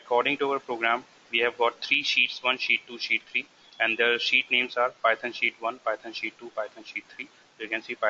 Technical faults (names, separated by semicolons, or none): none